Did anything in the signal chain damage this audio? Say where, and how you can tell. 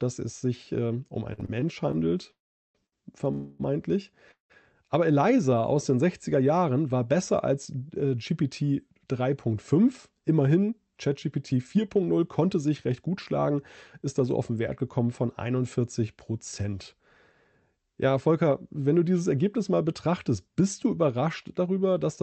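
Yes. The damage sits in the network and the receiver's jitter buffer, layered over the call codec, whose band tops out near 8 kHz.

Repeated stalls (stutter), 1.33 to 2.94 s, just after "es sich ähm um": the sound catches six times, with the longest catch about 58 ms and roughly 177 ms of held-over sound in total, about 11% of that stretch. Packets were arriving more slowly than they were played, so the jitter buffer kept running dry and the receiver stretched the last sound each time. Nothing is lost, but the flow drags and stumbles.

Call audio freezes at 2.31 to 2.76 s (432 ms), 3.32 to 3.61 s (270 ms) and 4.31 to 4.52 s (183 ms). In each one the sound hangs as a fading continuation of what came before. It drops to silence for about 380 ms in the first and about 120 ms in the third, while the 3.32 s one never reaches silence. The cause is likely packets held up in the network, leaving the buffer empty. 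Playback then resumes exactly where it stopped, so each freeze inserts a gap without losing content.

Jitter buffer slow-down, 5.30 to 5.63 s, just before "aus den": the audio runs at about 88% speed with its pitch unchanged, and about 45 ms has been added. With the buffer low, the receiver repeated single pitch periods to rebuild its reserve, which draws the sound out.

Jitter buffer speed-up, 10.63 to 15.07 s: across this span the audio runs at about 106% speed at the same pitch, and it sounds hurried. The buffer held more audio than it wanted, so the receiver trimmed short pitch-period pieces over and over, removing around 0.3 s in total.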